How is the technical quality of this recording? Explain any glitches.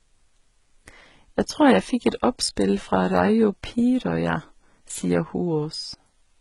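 The quality's held back by stacked compression artefacts throughout the speech. There's nothing above 11.7 kHz, and two different kinds of codec smear sit on top of each other, which points to transcoding between lossy codecs, likely a 33 kbit/s Vorbis-style encode re-squeezed into low-rate HE-AAC. The second pass wastes bits re-encoding the first one's artefacts and adds its own artefacts on top.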